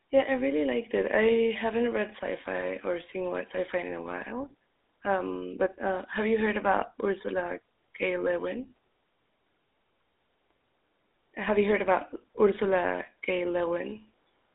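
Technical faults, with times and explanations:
Throughout, GSM full-rate codec: the speech is confined to a 250 Hz to 3.7 kHz band and carries a plainly audible buzzy, gravelly roughness, because the voice is rebuilt from a vocal-tract model driven by sparse, regularly spaced pulses. This fits a 13 kbps rate.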